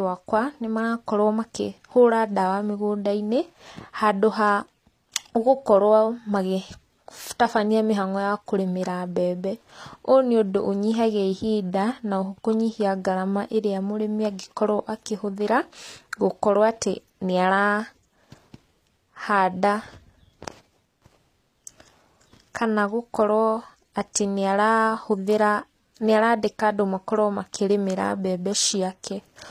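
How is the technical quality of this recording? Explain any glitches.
The speech carries plainly audible coding damage from start to finish, most likely HE-AAC compression at a low bitrate, with a sound that fits roughly 24 kbps. The treble is present and bright up to a hard ceiling near 14.9 kHz, but it doesn't belong to the voice: s sounds come out gritty and lispy, with a metallic sheen. That points to spectral band replication, where upper bands are copied from lower ones and shaped only coarsely, so their harmonics fail to line up. A plain low-bitrate codec with a lowpass would sound dull and muffled instead, not falsely bright.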